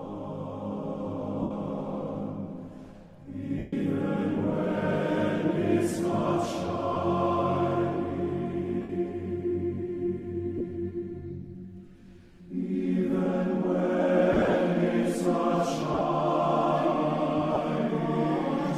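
Lost LE Audio frames at 1.42, 3.58, 6.93, 8.82, 10.58, 14.33 (scattered over 0.21 s), 15.93 and 17.54 s: the LC3 decoder fills each gap with a scrambled repeat of the last spectrum, heard as noisy smears.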